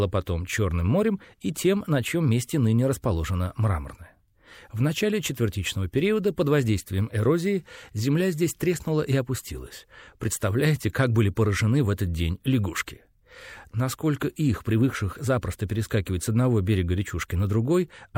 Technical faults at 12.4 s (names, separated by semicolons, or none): none